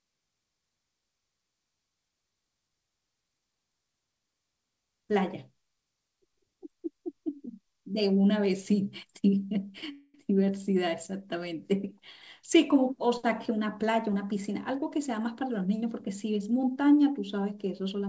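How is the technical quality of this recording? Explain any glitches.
The recording has two timing glitches, both typical of audio carried over a call connection. It is band-limited, with nothing above 8 kHz, which fits the G.722 wideband codec used on the call path.

From 9.92 to 10.15 s there is a call audio freeze. The last sound is held and smeared into a short buzzing or hissing tail for about 0.22 s, with no dead silence. The likely cause is delayed packets that left the jitter buffer empty, so the receiver extended what it already had. When the packets arrived, playback resumed where it stopped. That inserted a gap rather than losing anything, and everything after it plays about 0.22 s later.

From 13.49 to 17.01 s there is a jitter buffer speed-up. The speech sounds slightly hurried, running at about 106% of normal speed with no change in pitch. The buffer had built up more audio than it wanted, probably after late packets arrived together. 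To reduce the delay, the receiver repeatedly cut out tiny slices, each one or a few pitch periods long. Across the stretch these cuts remove roughly a fifth of a second.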